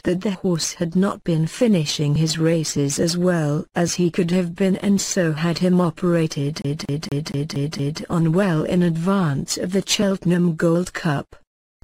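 From 6.62 s to 8.02 s the sound catches on a single fragment and stutters: the same 0.23 s slice plays six times in a fast, perfectly even loop, with a brief mute at every jump back. This is a CD stuck on one turn. A scratch at that spot on the disc sends the laser back one track each rotation, so the player keeps rereading the same short stretch before it finally moves on.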